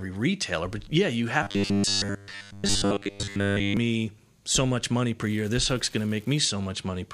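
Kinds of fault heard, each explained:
Robotic sound from repeated short buffers: From 1.43 to 3.77 s, just after "retailer but yeah you", the speech becomes a rigid, metallic buzz fixed at 100 Hz while still loosely tracing the words. The likely cause is audio arriving too seldom, so the player keeps looping the last 10 ms to fill the gaps. Most of the stretch is repeated material, with the real audio skipped.
Unreliable data bit: From 5.22 to 6.48 s, right after "so much money", a steady crackling fizz runs over the audio. A marginal data line flips one bit in a random share of samples, and each flip produces a spike of identical size. The fizz carries on through the pauses at the same level, which separates it from clipping distortion, since clipping appears only on loud peaks and follows the level of the signal.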